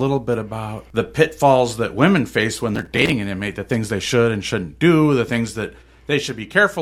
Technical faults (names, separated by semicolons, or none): processor overload crackle